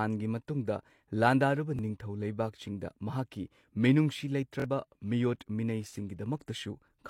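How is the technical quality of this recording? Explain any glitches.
The recording has two glitches, both repeated buffers. A repeated buffer occurs at 1.77–1.79 s, just after "ꯃꯇꯨꯡꯗ ꯂꯥꯟꯗꯥꯔꯨꯕ", and at 4.60–4.64 s. When new audio arrived late, the device replayed its last 23 ms block, which fits a 1024-sample buffer. That block plays once more at the first point and twice more at the second, with a hard join at each repeat. Each one is heard as a brief stutter, and roughly 20 ms and 50 ms of the original audio are lost.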